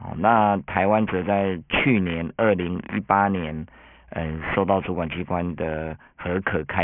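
Throughout the clip the speech sounds gritty and metallic, with sibilants smeared into harsh tones that run right up to a hard edge near 3 kHz. This is aliasing. The audio was downsampled without an anti-alias filter, which fits a 6 kHz rate, so content above 3 kHz folds back as false tones about 10 dB below the speech.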